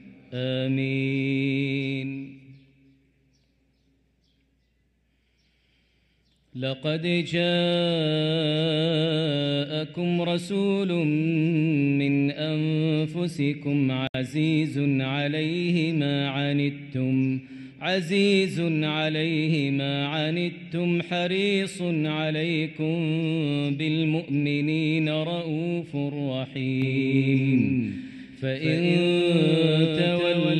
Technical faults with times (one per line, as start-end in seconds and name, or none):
14.07-14.14 gap at a join of encoded pieces
26.82-30.60 doubled audio track